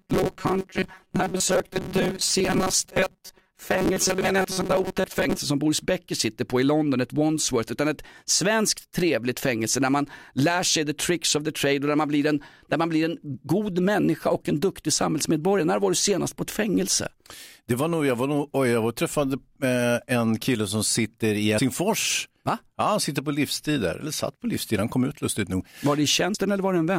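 From the start to about 5.4 s, the speech has a robotic sound, likely from repeated short buffers. New audio seems to arrive too seldom. The gaps get filled by replaying the last tiny slice. The buzz sits at 188 Hz, which fits a slice about 5.3 ms long. Roughly half of what you hear is repeated material. The voice becomes a stiff, metallic drone that still loosely tracks the speech.

Compressed frames are skipped twice. The first time is from 21.57 to 21.59 s, right after "kille som sitter i". About four frames of 23.2 ms drop out. That is roughly a tenth of a second of audio. The second time is at 26.33 s, where about two frames go, near 50 ms. Each time the speech jumps forward.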